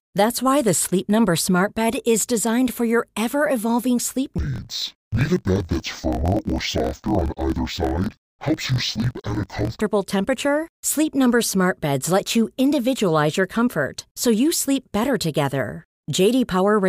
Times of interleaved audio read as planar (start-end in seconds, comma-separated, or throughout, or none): 4.38-9.82